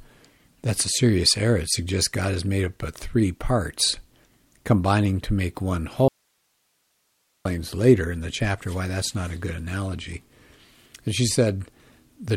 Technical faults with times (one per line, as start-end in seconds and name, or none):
6.08-7.45 audio dropout to a faint residue